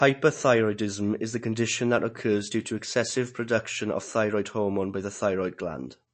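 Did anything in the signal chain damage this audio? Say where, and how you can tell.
Yes, at the codec stage, and it runs the whole way through this speech. There's nothing above about 8.3 kHz, a hard shelf where the encoder gave up on the top end. The s sounds come out swirly and watery, and onsets smear. That's the likely signature of MP3 compression starved of bits, which fits something near 35 kbps: it chops the treble at a fixed point and lets quiet frequency lines blink in and out between frames.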